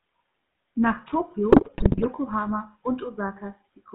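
GSM full-rate codec coding runs through the whole speech clip. The vocal tract is modelled and driven by sparse, regularly spaced pulses, at what fits a 13 kbit/s rate. The band is squeezed to 150 Hz to 3.6 kHz, and a plainly audible buzzy, gravelly roughness sits on the voice.

GSM bit errors strike from 1.50 to 2.06 s. Corrupted filter, pitch and gain values reach the decoder across many consecutive frames, pointing to an error rate of 2.9% on the link, so the speech twists into squawks, pops and gargling.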